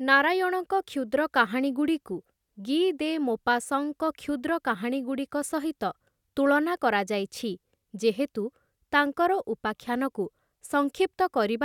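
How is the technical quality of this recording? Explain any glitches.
The technical quality of this recording is sound, with no glitches to explain.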